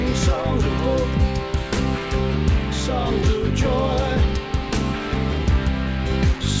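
No technical faults can be heard anywhere in the clip. It has passed through a working call path whose codec leaves nothing above 8 kHz, a band limit that fits G.722 at 64 kbps.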